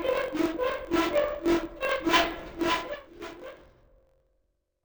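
From the first moment to the last, the clip has interleaved audio read as planar. Each block of about 21.8 ms holds alternating left and right samples, but the reader takes the first half as left and the second half as right, so each channel plays its samples at half speed within the block. Everything drops an octave, 12 semitones down, and comes out doubled and choppy, chopped up at the roughly 46 Hz block rate.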